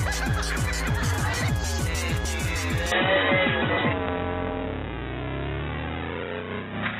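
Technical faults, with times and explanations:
2.92 s to the end, input switched to a poorer device: the system likely changed over to a narrower-band input with no gap. From that point nothing reaches above 3.8 kHz, so the sound turns dull and boxy at about the same level, over a new noise floor roughly 40 dB down.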